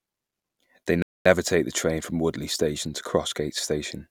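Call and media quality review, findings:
Playback stall, 1.02–1.26 s. Speech drops to silence for about 230 ms, then resumes at "take the train from". Probable component: player output path. Likely cause: buffer underrun or blocked playback thread, output starved until data returned.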